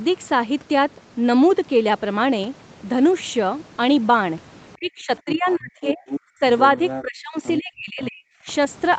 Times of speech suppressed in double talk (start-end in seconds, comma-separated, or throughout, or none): 4.77-6.04, 6.32-6.42, 7.02-8.28